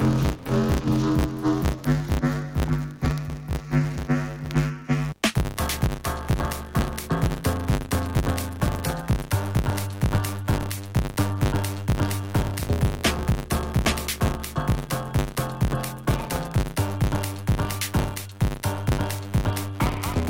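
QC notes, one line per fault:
Throughout: filter restarted on every block. A steady 100 Hz buzz rides under the sound, made of rapid ticks that grow louder in busy, loud passages and fade in quiet ones. The filter loses its stored state at every block boundary and starts each block as if from silence, so a small transient appears at each restart. Ticks repeating 100 times a second point to blocks about 10 ms long.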